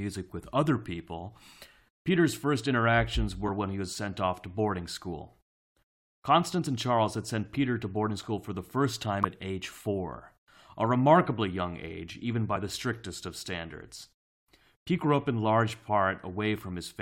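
Damaged data in a compressed stream makes the decoder misread frames and lose sync, producing brief blips at 6.65 s and 9.23 s, the second after "school for the first".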